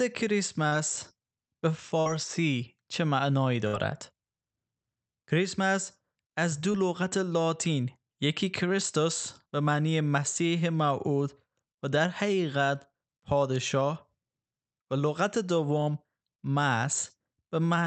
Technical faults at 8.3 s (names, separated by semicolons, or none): none